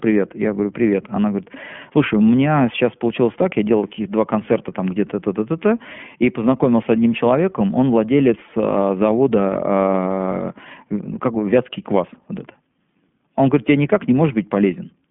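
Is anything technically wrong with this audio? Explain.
Yes. The iLBC codec affects the speech throughout. It codes each 20 ms frame independently, without using the previous one. Nothing above 3.6 kHz survives, so the speech sounds narrow and clearly rough and synthetic. The damage fits the 15.2 kbps mode.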